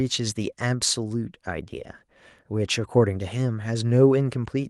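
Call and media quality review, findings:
No defects found in the speech signal: level, continuity and timing hold steady throughout, with nothing to attribute to any component in the capture or delivery chain.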